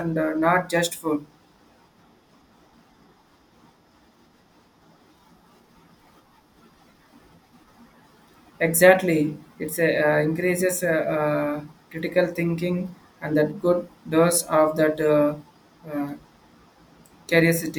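A speech recording, and nothing in it is technically wrong.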